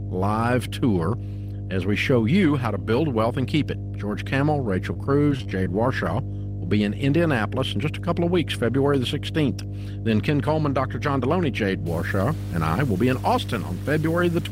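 A ground loop or nearby transformer is coupling the power line into the signal for the whole clip, producing mains hum: a steady 50 Hz tone with low harmonics underneath the speech, strong enough to sit nearly as loud as the voice itself.

From 4.93 to 5.66 s there is repeated packet loss, giving a robotic sound. Audio went missing in a rapid run of short holes, the longest about 22 ms, each patched by stretching the preceding sound. About 13% of that stretch is filled this way, so the speech turns choppy.

From 11.86 s to the end, the grainy distortion is likely caused by low bit depth without dither. The sound points to something like 6-bit truncation, with error that tracks the signal. A gritty noise floor sits clearly audible beneath the speech, and the quietest moments sputter or drop out.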